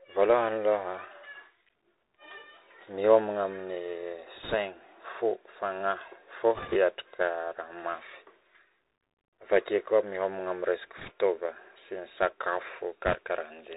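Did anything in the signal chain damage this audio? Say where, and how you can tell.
Yes. The speech runs through a Bluetooth CVSD headset codec for the whole clip, a codec-stage fault. Nothing above 4 kHz survives, s sounds come out scratchy, and a granular hiss sits under the voice. CVSD sends one bit per sample at 64 kHz, only saying up or down with an adapting step. Loud, high-pitched sounds outrun that step and distort, and the damage is plainly audible here.

Bit errors on a Bluetooth voice link hit the network/radio stage in four short bursts: 4.43–4.55 s, 6.55–6.77 s, 10.97–11.11 s (just after "miomagna aminy resaka") and 13.06–13.15 s. Each is a brief rushing crackle rather than a click, at around two percent of bits wrong, slightly less in the third burst. Because every CVSD bit carries equal small weight and errors decay, flipped bits smear into noise instead of spikes.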